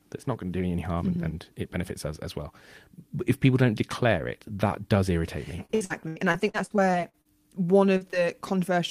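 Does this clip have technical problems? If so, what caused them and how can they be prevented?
Yes. From 5.65 to 7.27 s, repeated packet loss (robotic sound) occurs: packets kept arriving lost or late, and the receiver patched each hole by extending the previous sound. Roughly a quarter of that stretch is concealment, with gaps up to 81 ms, so the sound turns choppy and robotic. A wired or more stable connection, plus a larger jitter buffer, would prevent this.

Short concealed packet loss follows at 7.97 to 8.03 s and 8.11 to 8.15 s. Brief holes of about 40 ms and 20 ms were filled by continuing the last sound, leaving small smears or wobbles. Forward error correction or modest redundancy in the codec would cover such brief losses.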